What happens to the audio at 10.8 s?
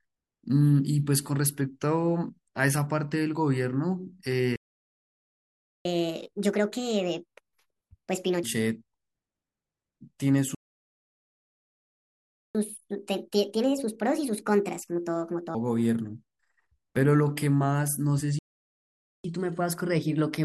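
At 10.8 s the speech is in a playback stall. The sound cuts off mid-flow at 10.55 s and stays silent for 2 seconds, until 12.55 s. The player likely ran short of data or was blocked. Playback then resumes.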